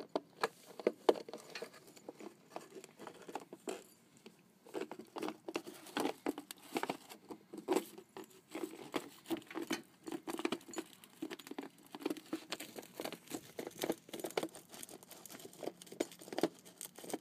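Nothing is technically wrong with this audio.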